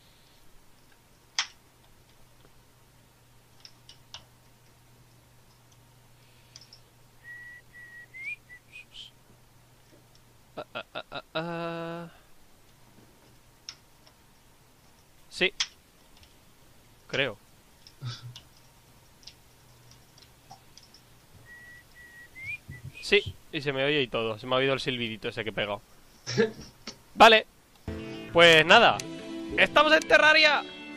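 No technical faults detected.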